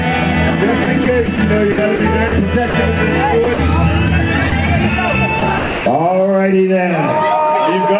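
Call audio carried over a narrowband path, with nothing above 4 kHz, which fits G.711. There's sound chopped by the voice detector at 0.84–1.38, 1.72–2.00, 3.44–3.58 and 5.40–5.86 s. The sender likely kept toggling transmission there, so chunks of 80, 100, 60 and 300 ms respectively were swapped for comfort noise. Separately, there's sound dropped by the voice detector at 2.28–2.32 s, 2.70–2.74 s and briefly at 4.50 s. Each time, the sound gives way to steady comfort noise for 40, 40 and 20 ms, likely because a quiet stretch was mistaken for background.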